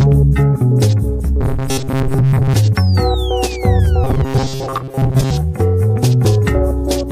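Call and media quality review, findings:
Robotic sound from repeated short buffers, 1.41–2.54 s and 4.04–5.31 s: rigid 134 Hz buzz, likely playout-buffer underrun looping roughly 7.5 ms segments, most real audio skipped.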